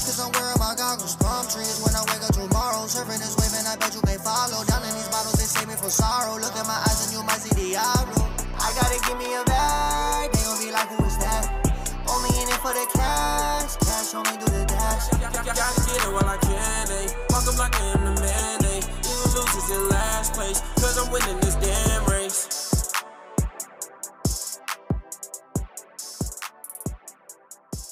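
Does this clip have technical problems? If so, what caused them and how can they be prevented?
Yes. At 20.73 s there is a tiny jump forward in the sound, likely a dropped buffer (overrun): a few milliseconds of samples were overwritten before being read, leaving a waveform discontinuity and a thin vertical broadband line on a spectrogram. Larger buffers or higher-priority audio threads prevent this.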